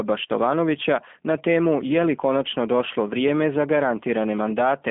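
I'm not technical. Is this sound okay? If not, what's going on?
No. Throughout, the voice sounds thin, muffled and faintly robotic, with a slightly rough, buzzy edge, like a call over an internet phone line. That comes from the G.729 codec, a phone-call compression method that rebuilds the voice from a rough model of how speech is produced instead of keeping the real sound. It also throws away all the brightness, so nothing above about 3.6 kHz survives, and the damage here is plainly audible.

Between about 2.74 and 2.80 seconds there is a brief crackle or harsh edge on a loud moment. That is hard clipping: the sound briefly got louder than the equipment could handle, so the tops of its loudest waves were chopped off flat. Those flattened peaks add a gritty distortion. Here the overload is slight and lasts only a fraction of a second, so it comes across as a short crunch on a peak rather than fuzz across the whole clip.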